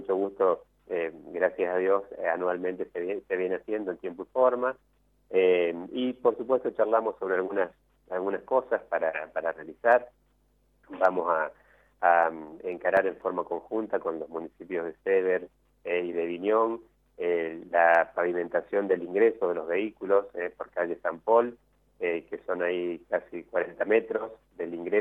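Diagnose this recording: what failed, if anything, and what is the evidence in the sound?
A short run of regular ticks appears between 11.49 and 13.46 s: nine tiny clicks or micro-dropouts, the longest only a couple of milliseconds, spaced about four a second. These are CD scratch ticks from the disc playback stage. A blemish on the disc wipes out more data than error correction can rebuild on each revolution, so the player interpolates or mutes those few samples, leaving a tick that repeats with the disc's rotation.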